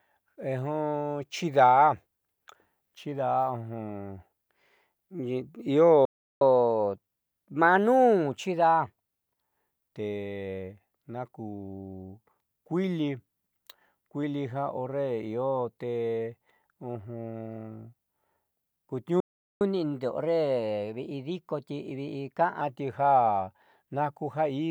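The speech cuts to silence twice mid-flow, from 6.05 to 6.41 s and from 19.20 to 19.61 s, gaps of about 0.36 and 0.41 s before it resumes where it stopped. These are playback stalls, likely from the player running out of buffered data or having its output thread blocked. After each gap, catch-up at higher speed follows. From 6.41 to 9.41 s and from 19.61 to 22.61 s the speech runs 1.1 times faster and sits roughly a semitone and a half higher, as the player resamples its backlog to win back some of the lost time, then drops back to normal pace and pitch.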